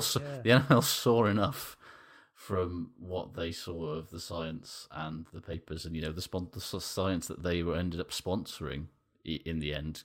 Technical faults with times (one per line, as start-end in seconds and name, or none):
2.25-5.54 channel delay (comb filtering)